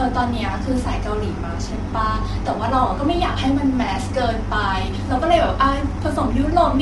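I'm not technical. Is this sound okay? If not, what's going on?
No. Low-delay AAC compression runs through the whole clip. The speech sounds rough and grainy, with noise between its pitch tones and nothing above 11.6 kHz. This likely comes from a video-call codec that cuts sound into very short slices, which capture voice pitch poorly.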